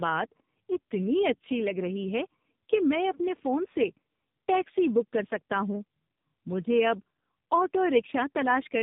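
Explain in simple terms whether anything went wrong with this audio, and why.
Tandem speech coding runs through the whole clip, from start to finish. The call passed through two different speech compression systems in a row, with a plain telephone link between them, so the speech was squeezed, unpacked and squeezed again. The second squeeze worked on sound the first had already damaged. That is why the speech sounds rough, muffled and warbly, with nothing above about 3.8 kHz.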